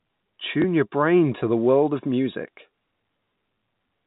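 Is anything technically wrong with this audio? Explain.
Yes. Packet loss with the last packet repeated occurs at 0.62 s, where a single 20 ms stretch of the speech went missing and the receiver filled the gap by replaying the packet it had just played. The replayed block seldom lines up with the pitch cycle of the voice, and the brief repeat comes across as a small blip within the narrowband telephone-quality sound.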